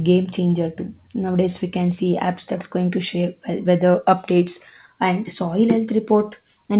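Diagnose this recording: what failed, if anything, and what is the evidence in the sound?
A short concealed packet loss hit the network stage at 3.92 to 3.96 s: about 20 ms of speech never arrived in time, and the receiver extrapolated the preceding sound, then crossfaded back. On a waveform, a brief, smoothed continuation of the preceding sound; on a spectrogram, a smeared column under the 4 kHz ceiling.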